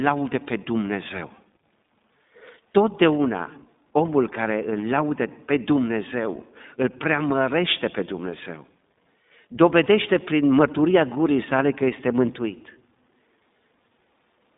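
Throughout, the speech sounds thin, rough and faintly synthetic, with nothing above 3.7 kHz. This is iLBC codec damage from coding each 20 ms frame independently.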